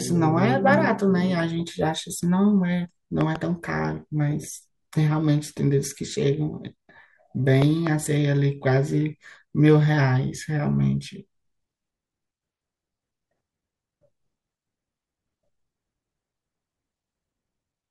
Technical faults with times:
3.21-3.38 loud pop
7.62-7.89 loud pop

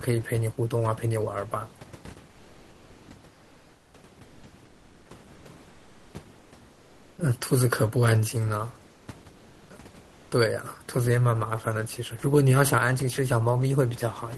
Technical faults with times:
3.33-3.93 comfort noise in place of the background
4.25-5.09 comfort noise in place of the background
5.35-6.13 comfort noise in place of the background
6.39-7.17 comfort noise in place of the background
8.91-9.07 comfort noise in place of the background
10.07-10.31 comfort noise in place of the background

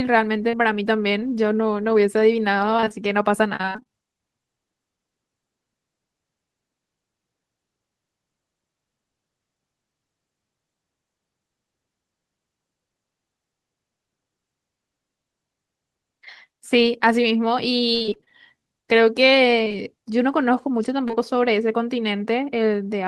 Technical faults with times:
0.49-0.55 short concealed packet loss
2.77-3.89 repeated packet loss (robotic sound)
17.95-18.32 repeated packet loss (robotic sound)
19.65-19.76 repeated packet loss (robotic sound)
21.08-21.18 repeated packet loss (robotic sound)

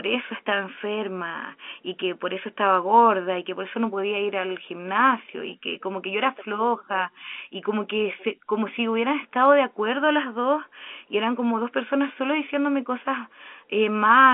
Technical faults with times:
none

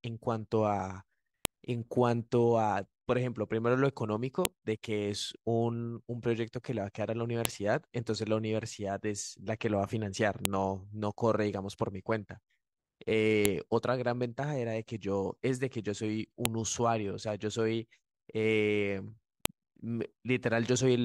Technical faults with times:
1.45 file header played as audio
4.45 file header played as audio
7.45 file header played as audio
10.45 file header played as audio
13.45 file header played as audio
16.45 file header played as audio
19.45 file header played as audio

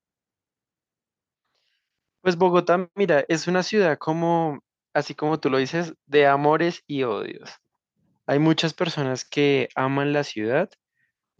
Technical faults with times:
none

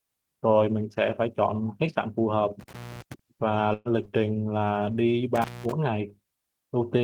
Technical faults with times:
2.60-3.14 intermittent contact
3.73-3.88 burst of packet loss
5.35-5.72 intermittent contact

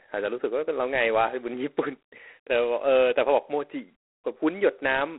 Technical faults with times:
0.00-5.19 G.726 ADPCM

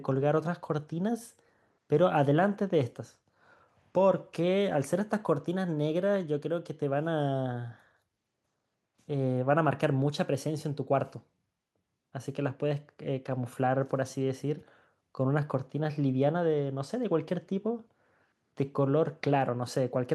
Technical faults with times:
none

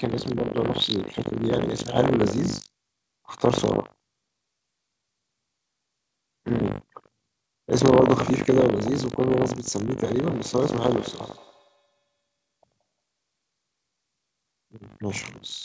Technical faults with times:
0.00-15.64 buffer tearing
10.03-12.99 feedback echo between two devices

